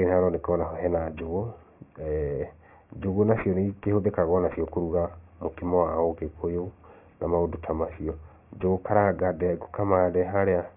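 Aliasing runs through the whole clip. The speech was resampled to a much lower rate without an anti-aliasing filter first, and the band edge at 3 kHz points to a 6 kHz rate. Everything above 3 kHz fold back into the audible range at unrelated frequencies, around 25 dB below the speech. Sibilants turn gritty and metallic, and the spectrum runs hard up to the 3 kHz edge with nothing above.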